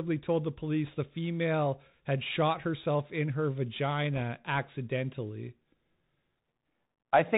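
From the first moment, the speech carries the sound of the Bluetooth CVSD headset codec. Everything above 4 kHz is gone, and s sounds come out scratchy. A fine granular hiss sits beneath the voice, and loud, bright moments smear as the one-bit up/down steps fail to keep pace with them. The plainly audible damage fits a 64 kbps CVSD link. That slope-overload roughness and steady grain set it apart from a clean telephone-band filter, which would only dull the sound.

Between 0.86 and 0.90 s, just after "told the" and before "the female had shot", bit errors on the Bluetooth voice link add a short, rushing crackle. A second burst of the same kind, slightly longer and a little milder, follows at 4.16 to 4.22 s. Each flipped bit moves the signal by only one step, sized to the current speech level, and the error fades within a few samples, so neither burst clicks or drops out the way lost packets would. 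Instead the sound turns noisy and gritty, which fits a bit error rate of around one to two percent.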